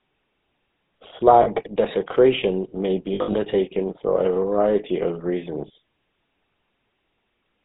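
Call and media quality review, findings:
GSM full-rate codec, whole clip: buzzy, gravelly roughness on the speech, nothing above 4 kHz, damage plainly audible. Fits 13 kbps GSM full rate, where a vocal-tract model is driven by a regular pulse train keeping only every third excitation sample.

Lost GSM frames, three spots: brief metallic ring at 1.42–1.47 s before "desecration may"; longer patch 3.14–3.35 s between "desecration may" and "for a variety of", gaps scattered over about 200 ms, longest about 70 ms; short blip 5.68–5.71 s after "for a variety of". Concealment repeats the last good frame, level usually falling from the second lost frame on.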